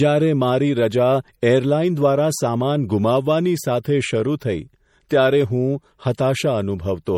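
Throughout the speech there is a hard treble ceiling near 17.2 kHz and a watery, swirling texture on sibilants, the typical sound of MP3 compression, likely at a low bitrate around 48 kbps, where the encoder drops weak frequency lines from frame to frame. At 5.09 s, and again from 6.15 to 6.18 s, a brief hiss leads a sharp attack by about 16 and 31 ms. This is pre-echo: quantisation noise spreads across the transform block into the quiet moment before the onset, softening it.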